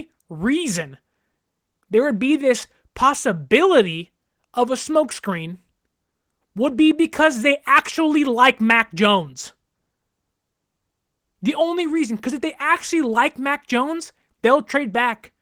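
No technical faults can be heard anywhere in the recording.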